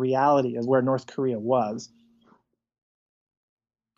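No technical faults can be heard anywhere in this recording of speech. Nothing in the audio points to a problem with how it was captured or passed along.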